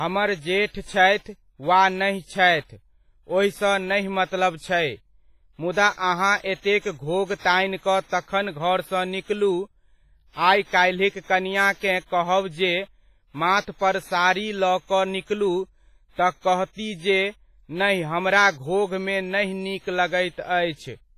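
Across the whole speech clip the sound is smeared and ringing, with a hiss that swells and fades along with the signal and nothing above 15.5 kHz. This is likely WMA compression: a transform codec using long blocks spreads quantisation error over tens of milliseconds and zeroes weak spectral lines, and the heavy damage fits a bitrate around 24 kbps. Unlike steady background noise, the hiss tracks the signal, and the washy pre-echo sets it apart from simple low-pass filtering.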